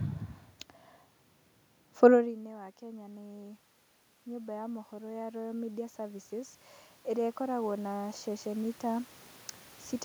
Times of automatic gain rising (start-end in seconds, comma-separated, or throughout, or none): 4.24-9.11